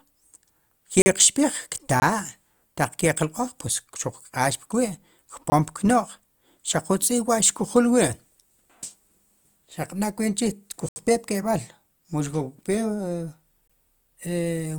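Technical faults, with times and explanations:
Throughout: DC offset. The whole speech waveform sits shifted off the zero line by a constant amount, eating into headroom without being directly audible. On a waveform the trace is visibly off-centre; a spectrogram shows a steady band of energy at 0 Hz.
1.02–1.06 s, 2.00–2.02 s, 5.50–5.52 s, 10.89–10.96 s and 13.68–13.70 s: block of digital silence. Runs of samples drop to silence, 20 ms in most cases, 40 ms at 1.02 s and about 75 ms at 10.89 s. The sound cuts out and back with no fade. Each reads as a brief hole, the longest most of all. The waveform shows flat gaps; the spectrogram shows blank vertical slots.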